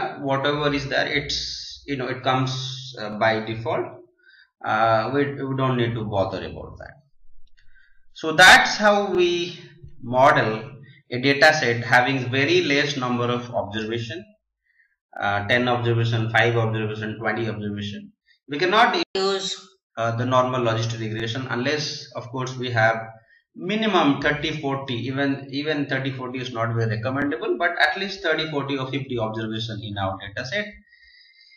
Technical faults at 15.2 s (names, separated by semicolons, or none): overlapping chunks